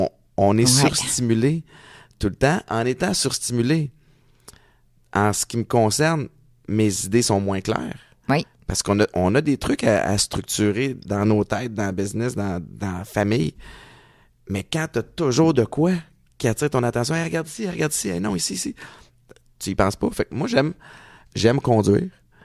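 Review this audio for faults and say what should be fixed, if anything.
Nothing to fix: no faults detected in the speech recording.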